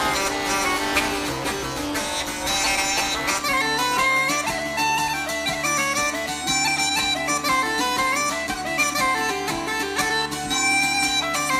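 A robotic 200 Hz buzz runs from 0.0 to 3.42 s: buffer tearing, with each buffer partly replaying audio from a lap earlier.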